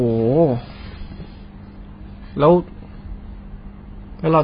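From start to finish the speech is band-limited, with nothing above 5 kHz, and sounds dull and smeared, with a warbling, fizzy texture on sustained sounds and sibilants. The damage is heavy, likely from AAC compression at a very low bitrate, which fits about 16 kbps AAC-LC.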